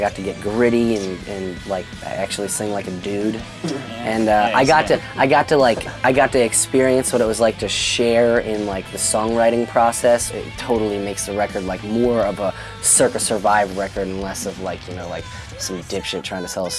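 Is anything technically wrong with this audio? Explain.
Yes. Throughout the clip a resampler restarted on every block: the conversion from 48 kHz to 24 kHz was done block by block, in 100 ms blocks, with no carry-over between them. Each block edge is filtered against missing neighbours, leaving a small error there. The result is a steady tick at 10 Hz that follows the signal and vanishes in quiet passages. Unlike buffer underruns, nothing drops out and the ticks stay evenly spaced rather than sporadic.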